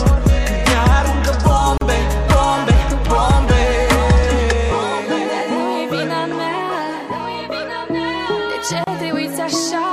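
At 1.78 s and again at 8.84 s the audio drops into a brief silence, about 38 ms and then about 32 ms long, before picking up exactly where it left off. Each is a gap at a join of encoded pieces: separately encoded segments were spliced without trimming the encoder's leading delay and final-frame padding. Unlike a dropout or lost packet, nothing is missing from the sound itself. Time is inserted, and the softened edges show the codec smearing those cuts.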